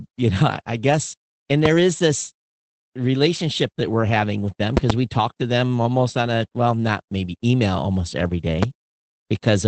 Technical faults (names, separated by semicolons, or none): Opus voice compression; loud pop